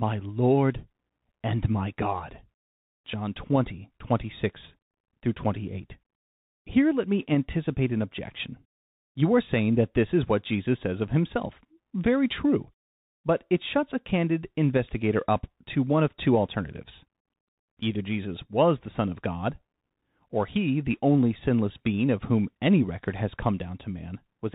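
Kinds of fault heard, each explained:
Bluetooth CVSD headset codec: the speech throughout carries the plainly audible damage of the narrowband headset link, where each sample is coded as a single up-or-down bit at 64 kHz and the step size adapts as it goes. The audio is cut off at about 4 kHz, leaving it thin and muffled. Loud, bright sounds move faster than the step can follow and distort, s sounds come through scratchy, and a grainy hiss sits beneath the speech.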